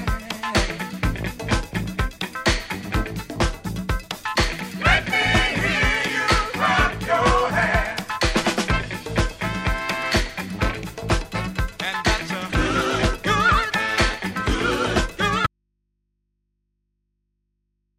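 At 15.47 s the wanted signal is likely lost upstream while the path after the break stays live, an audio dropout to a faint residue. The sound cuts off abruptly and, through to the end, only mains hum remains, roughly 50 dB below the earlier level.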